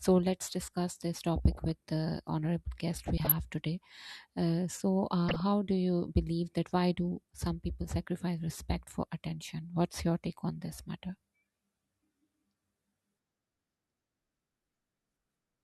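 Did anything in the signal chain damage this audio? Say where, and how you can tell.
Yes. Three bursts of burbling sit over the speech at 1.38 to 1.64 s, 3.04 to 3.32 s and 5.29 to 5.40 s. This is DAB burbling, damage from the broadcast reception and codec stage. Weak reception let bit errors, consistent with a rate under about half a percent, slip past error correction into the MP2 data. Corrupted samples then put short blips of noise into single sub-bands, producing the gurgle.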